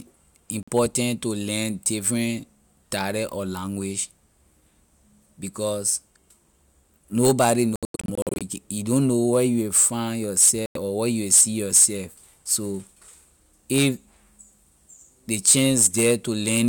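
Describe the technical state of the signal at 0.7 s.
At 0.7 s the speech is just returning after a brief silent gap from 0.63 to 0.70 s, picking up further along as though it had played on. It is a Bluetooth dropout, likely from late audio packets being discarded before reaching the headphones.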